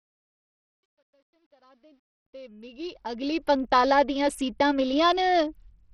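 From 0.0 s the speech fades in smoothly to full level at 3.56 s, just before "दियां सीटां", but the quiet part carries truncation distortion on a fade. The gain stage kept too few bits with no dither, which fits roughly an 11-bit word length, so the low-level waveform collapses into coarse square steps. It sounds gritty, worst from 0.0 to 2.27 s. A waveform view shows stair-stepped shapes, and a spectrogram shows broadband grainy noise tied to the sound.

Throughout the clip there is heavy damage that is likely Bluetooth SBC compression at a low bitrate that fits 64 kbps. The coarse sub-band quantisation leaves the treble flickering and thin, with gritty noise and aliasing. On a spectrogram nothing appears above 14.5 kHz, and the upper bands show as patchy, blocky strips that switch on and off.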